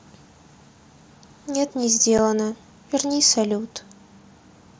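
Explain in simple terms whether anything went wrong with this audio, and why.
At 2.18 s, one tiny chunk of sound sent from headset to phone went missing, an unconcealed Bluetooth headset packet loss, leaving an abrupt 7.5 ms gap that can click.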